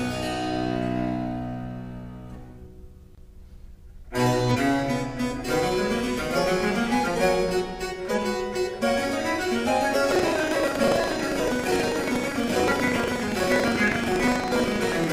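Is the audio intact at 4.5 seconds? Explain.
No. Between 4.51 and 4.57 s, compressed frames are skipped: the decoder plays nothing from a run of frames that were either absent from the file or rejected as corrupt, so the audio jumps forward by about half a second. That jump fits roughly ten frames of about 46 ms each. At the join, the sound has leapt ahead.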